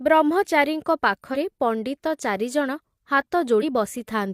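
At 1.30 to 1.36 s and again at 3.58 to 3.64 s, the speech briefly breaks up. Each break lasts about 60 ms. This is damaged data in a compressed stream. Corrupted bytes make the decoder misread frames and lose sync until it finds the next valid header.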